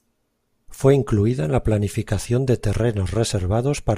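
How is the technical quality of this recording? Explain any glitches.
The technical quality of this recording is good, with no glitches to explain.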